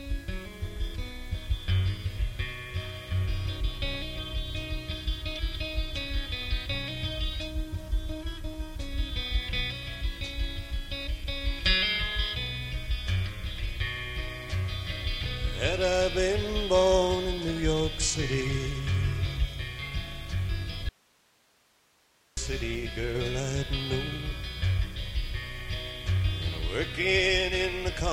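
At 20.89 s the sound cuts out abruptly and only hiss, roughly 35 dB below the signal, remains until it snaps back at 22.37 s, about 1.48 s later. This audio dropout to a faint residue likely comes from the wanted signal being lost while the path after the break stayed live.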